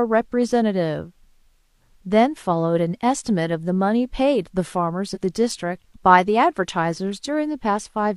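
From 5.11 to 5.18 s, compressed frames skipped: one 46.4 ms frame was lost or rejected by the decoder, so the speech jumps about 50 ms ahead.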